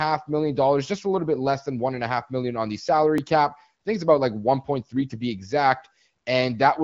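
At 3.18 s a repeated buffer occurs: fresh audio reached the output late, so the device replayed its last block, about 5 ms long, one extra time. The hard join heard here is a brief click rather than a stutter, with no audio lost.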